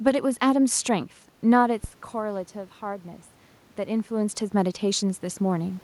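At 1.84 to 1.91 s comes a phantom power thump. A supply switched on or off on the live input sends a voltage step through the coupling capacitors, giving a deep thud that dies within 15 ms. The waveform shows a one-sided jump, and the spectrogram a brief low-frequency burst.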